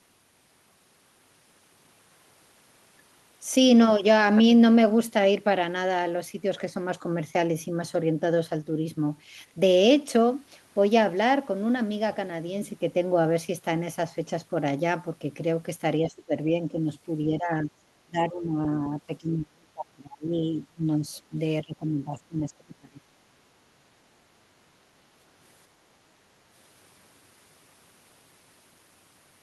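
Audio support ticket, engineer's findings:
Speech suppressed in double talk, 16.07–16.33, 16.68–16.77, 17.33–17.71, 18.05–21.38, 21.62–23.22 s. Short, shallow dips first, then deep gaps lasting seconds. Waveform envelope drops out. Likely echo canceller attenuating near talker during simultaneous far-end speech.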